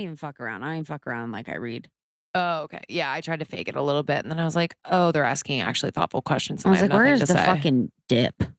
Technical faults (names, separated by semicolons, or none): automatic gain rising